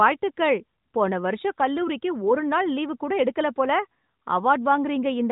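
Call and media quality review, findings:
No faults found.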